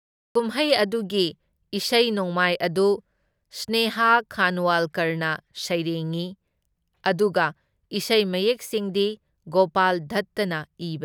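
The opening 0.35 s is dead digital silence, and at 0.35 s the speech bursts in abruptly mid-sound, with no natural attack or fade-in. This is a cut-off start: capture or streaming began late, so the beginning of that sound was never recorded.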